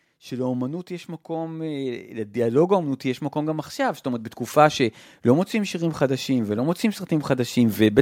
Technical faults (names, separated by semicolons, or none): automatic gain rising